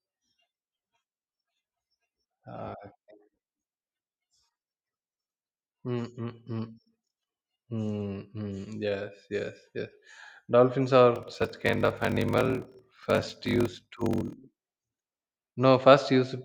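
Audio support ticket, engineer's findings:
Block size mismatch (padded), 11.14 to 14.35 s. Buzz at 41.7 Hz. Speech runs slow, 0.889x, timbre kept. Writer stage fills shorter blocks than the reader takes. Zero padding inserts a gap per block. Fits 1024-sample writes into 1152-sample reads.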